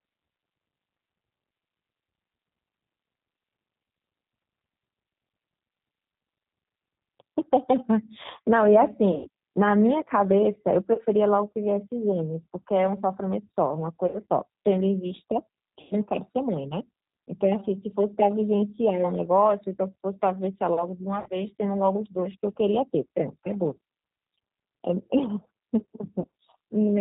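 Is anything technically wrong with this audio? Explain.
Yes. The whole clip went through the G.729 codec, and the damage is plainly audible. The sound points to an 8 kbit/s G.729A link. Each 10 ms frame is rebuilt from a vocal tract filter, a pitch predictor and a few pulses, so nothing above 4 kHz survives and the speech sounds rough and synthetic.

VoIP packet loss concealed by the speech codec occurs at 9.15–9.28, 10.94–11.01, 14.07–14.16, 15.81–15.95, 21.20–21.30 and 26.20–26.27 s, with about 100, 40, 60, 100, 60 and 40 ms of data missing. The decoder extends its last pitch and filter into a fading buzz, and the speech stays weak briefly afterwards.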